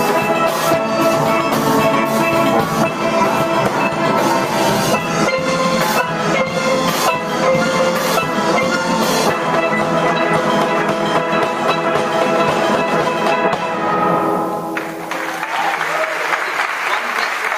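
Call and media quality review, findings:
Gain pumping, throughout the clip. Gain swings by around 15 dB. Loud and soft passages squashed close together in level; dynamics flattened. Likely cause: input gain set far too high for the mic, with a fast limiter or compressor clamping down on every peak and releasing in the pauses, so the gain rises and falls with the sound.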